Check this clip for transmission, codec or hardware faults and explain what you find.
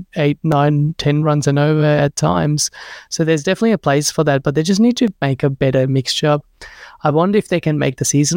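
Two brief dropouts to digital silence show up in this speech. At 0.52 s, just before "ten runs and over", and at 5.08 s, between "but they just need" and "make a better", a brief tick or dip interrupts the sound. Each is a block of digital silence about 1.45 ms long, which fits a 64-sample buffer left unfilled and output as zeros. The sound cuts to silence and back with no fade.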